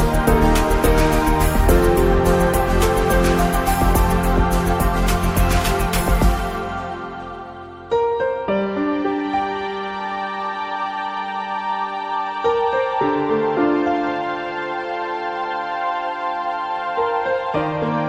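No faults detected anywhere in the audio.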